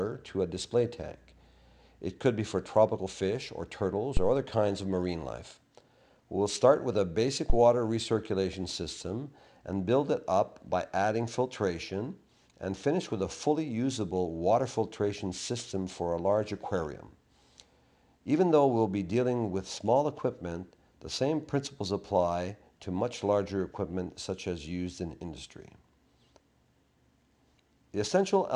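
Phantom power thumps at 4.17 to 4.37 s and 7.50 to 7.58 s: a supply switching on a live input pushes a voltage step through the coupling capacitors, giving deep pulses peaking about −13 and −12 dBFS that die away within 44 and 19 ms, cleaner and more uniform than handling noise.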